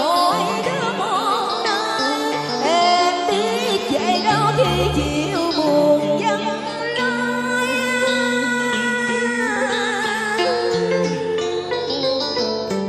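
Throughout, the sound is plainly watery, with weak detail swirling in and out, likely from MP3 compression at a low bitrate around 64 kbps. On a spectrogram this shows as speckled, flickering gaps in the spectrum.

At 6.78 s and again at 9.55 s, compressed frames are skipped: the audio jumps ahead by around 50 ms, which fits two dropped 26.1 ms frames. Each join is a brief smeared blip rather than a click, visible as a small waveform discontinuity.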